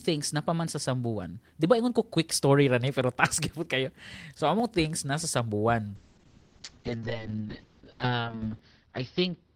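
A call bitrate drop hits this speech clip at 5.96 s and lasts to the end. The encoder's rate falls from 32 to 6 kbps, bottoming out for about 2.5 s. Coarser coding turns the sound rough and watery, while bandwidth narrows from 20 kHz to 6 kHz, muffling it.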